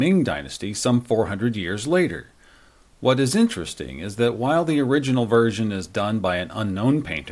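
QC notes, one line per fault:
No faults found in this speech clip.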